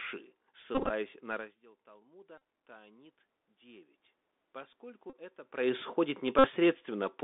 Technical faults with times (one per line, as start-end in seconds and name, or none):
0.00-7.24 Bluetooth CVSD headset codec
0.75-0.90 Bluetooth headset packet repeated
1.32-3.98 automatic gain rising
2.38-2.40 Bluetooth headset packet repeated
5.10-5.15 Bluetooth headset packet repeated
6.39-6.48 Bluetooth headset packet repeated